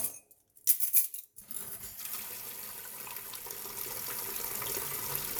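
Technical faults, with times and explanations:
1.41–1.43 s, skip ahead: the sound jumps abruptly forward with no gap, as if about a second were cut out and the two sides spliced together. That stretch was dropped, in transit or by an overflowing jitter buffer, so playback resumed about a second closer to live.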